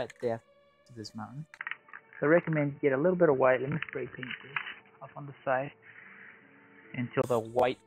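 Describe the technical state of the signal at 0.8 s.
At 0.8 s the signal is intact, with no audible fault at that moment.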